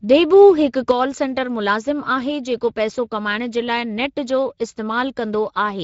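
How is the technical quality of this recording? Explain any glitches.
Quality is fairly rough, with two problems on the speech.

Speex codec damage runs throughout. It's plainly audible, nothing comes through above 7.7 kHz, and the hoarse, noisy grain fits a mid-range Speex bitrate starving the excitation.

A sudden gain jump hits at 0.91 s. Speech and background drop together by about 6 dB and stay down to the end, likely from a gain change applied without a ramp.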